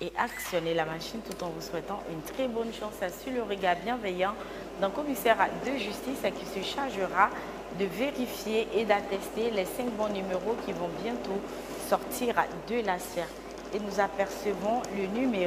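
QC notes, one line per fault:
Nothing here needs flagging, so there's nothing to log for this one.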